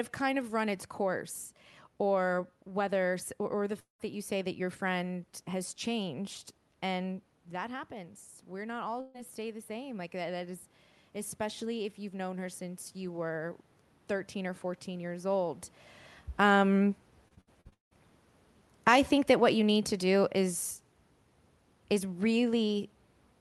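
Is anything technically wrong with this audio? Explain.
Yes, there are several faults.

From 3.79 to 4.01 s, about 0.2 s of audio is lost. A fading buzz or hiss fills the hole, then roughly 130 ms of silence. This is likely a long network dropout.

From 7.05 to 10.57 s, automatic gain rising is audible. The talker moved back near 7.0 s, and the level dropped about 10 dB. The gain control then raised the level about 4 dB, so voice and background swell together.

From 9.01 to 9.16 s, a burst of packet loss removes about 140 ms. The receiver stretches the last sound into a fading buzz or hiss. The audio then resumes further on.

From 17.28 to 17.93 s, repeated packet loss gives a choppy sound with pieces missing. Six gaps occur, the longest 172 ms. Over half of this stretch is patched-in sound.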